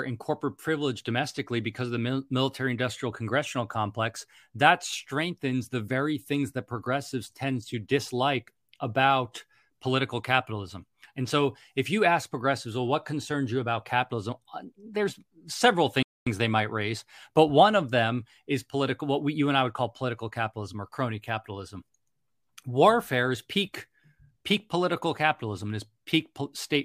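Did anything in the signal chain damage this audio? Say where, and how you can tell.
Yes: a playback stall. After "there's several" the speech drops to flat silence from 16.03 to 16.27 s, a blank vertical band on the spectrogram, likely from the player's buffer running dry.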